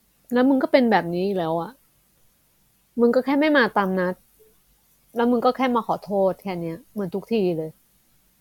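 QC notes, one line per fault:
Nothing stood out on listening to the speech.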